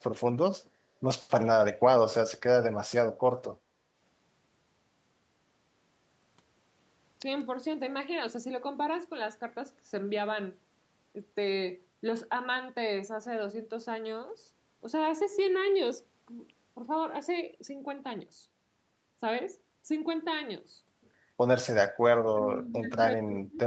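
At 3.65 s the room sound behind the speech dips briefly. This is background gated by the echo canceller. While the far-end loudspeaker was active, the canceller pulled the microphone level down to stop echo leaking back. Here the drop is shallow, about 6 dB, and lasts roughly 50 ms before the canceller releases. It sounds like a small hiccup in the ambience, a moment where the room goes slightly dead and then returns.

From 22.25 s to the end of the clip, the talker's speech is pushed down hard, by roughly 30 dB at its deepest. The likely cause is speech suppressed in double talk. Both sides seem to be speaking at once. The canceller cannot tell the local voice from the loudspeaker echo, so it attenuates everything. The voice sinks. The clip's top end stops at 8 kHz, consistent with the call codec's bandwidth.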